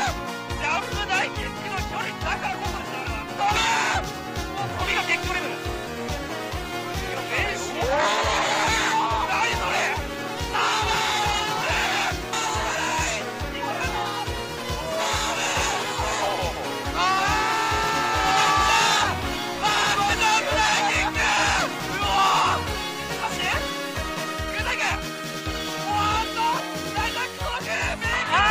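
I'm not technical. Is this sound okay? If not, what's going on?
Yes, no faults here.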